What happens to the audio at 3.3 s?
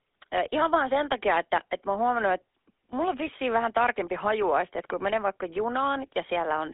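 Between 3.27 and 3.32 s, right after "huomannut että mulla on" and before "vähän tarkempi hajuaiste että", the speech breaks into a short squawk with a gargling, popping edge. These are GSM bit errors. Corrupted bits reached the decoder and scrambled its filter, pitch and gain values, so a few frames come out with a warped spectrum or a jump in level. The span fits about three 20 ms frames and a weak link. Packet-loss concealment would instead leave a gap or a smeared repeat of the previous sound. Here the decoder confidently produces wrong, harsh sound.

That burst sits on top of the GSM full-rate codec, which runs through the whole clip. The codec rebuilds the voice from a vocal-tract model driven by sparse, regularly spaced pulses, and that gives the buzzy, gravelly roughness heard around 3.3 s. The band is limited to roughly 300 Hz to 3.6 kHz, which fits 13 kbps full-rate GSM. A clean band-limited phone line would sound thin but smooth, without this grain.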